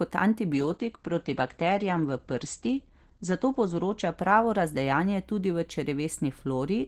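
At 0.52 s a call bitrate drop sets in and lasts to the end of the clip. The call's bandwidth estimate fell, so the encoder was forced to spend far fewer bits. The sound points to a fall from around 48 kbps to about 10 kbps. Speech is coded more coarsely and turns rough and watery. The top end is cut too, from 20 kHz down to 8 kHz, so it sounds muffled. The worst stretch lasts about 2.4 s.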